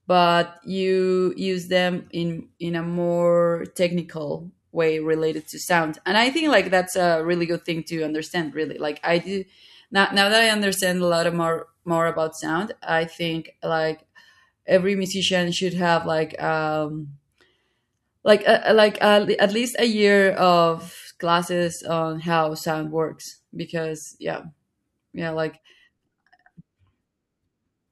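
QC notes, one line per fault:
10.13–12.13 s, pre-emphasis left on: after "like i do now", an unreversed 75 µs FM treble boost lifts 10 kHz by about 14 dB, giving thin, sibilant speech and a visibly brighter upper spectrogram band.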